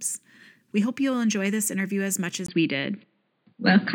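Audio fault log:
2.46–3.95 s input switched to a poorer device: after a 20 ms gap, everything above 4.8 kHz vanishes, the level shifts about 5 dB, and faint new noise appears, unlike plain filtering; likely a device change.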